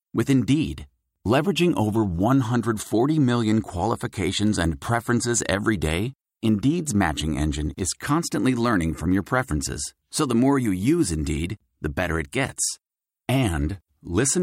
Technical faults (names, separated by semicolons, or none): block size mismatch (truncated)